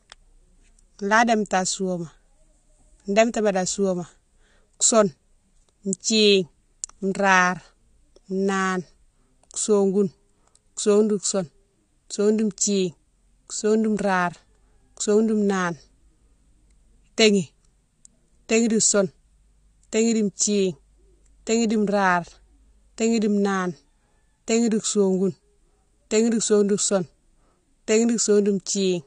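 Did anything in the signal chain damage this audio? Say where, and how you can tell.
Yes. Throughout the speech there is plainly audible codec damage, and nothing reaches above 9.8 kHz. On a spectrogram this shows as a flat ceiling at 9.8 kHz running the full length, with empty space above it. This is likely AAC compression at the codec stage, consistent with AAC-LC at a low bitrate around 32 kbps. The encoder, short of bits, drops the top band entirely and quantises the remaining spectral lines coarsely against its hearing model, dulling and smearing the sound.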